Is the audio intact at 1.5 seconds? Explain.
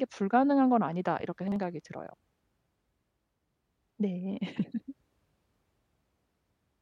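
No. Between 1.48 and 1.56 s there are chunks out of order: one 40 ms chunk of speech arrived a chunk late and plays after its successor. Nothing is lost, but the swap creates three hard joins, heard as a brief jumbled stutter.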